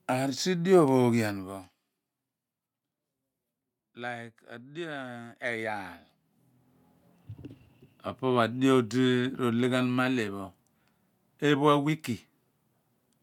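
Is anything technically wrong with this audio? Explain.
No, the speech signal is in sound technical condition, with nothing going wrong in its level, timing or frequency content.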